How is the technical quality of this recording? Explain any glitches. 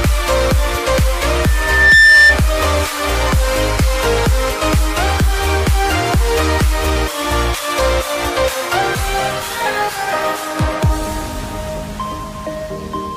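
The recording has one clear glitch. From 1.45 to 2.40 s a piercing tone at 1.8 kHz swells up over roughly half a second and ends well above the rest of the sound, perhaps about 10 dB louder. That is loudspeaker feedback squeal. A microphone was picking up the speaker it was driving, and at 1.8 kHz the round trip gained more than it lost. The tone kept reinforcing itself until the amplifier limited it or the loop was broken.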